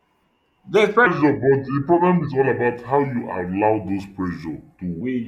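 A section at the wrong speed runs from 1.07 s to 5.01 s in this speech clip: playback drops to 0.761 times the original rate, so the sound turns slow and deep, roughly five semitones lower, likely because that stretch was fitted to the wrong clock.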